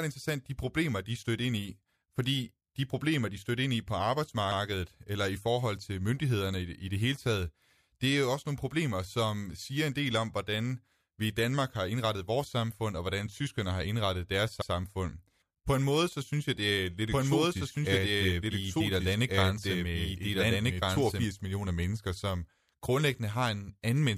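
At 14.62 s, just after "tyskerne har indrettet deres", overlapping chunks make a 100 ms stretch of the speech play twice, because a new 10 s chunk began before the previous one had finished. It is heard as a quick stutter. On the waveform, the same 100 ms shape appears twice back to back, and the spectrogram shows a short block of harmonics copied with a visible seam.

From 17.10 to 21.24 s, between "jeg det er lidt" and "millioner mennesker som grundlæggende", a doubled audio track lays a full-band copy of the speech about one and a half seconds behind, at roughly the same loudness. This is likely caused by a second, slower capture path being mixed in. The copy is dry, with no decay, and it begins and ends abruptly. On a spectrogram, the whole formant pattern reappears shifted right by that delay.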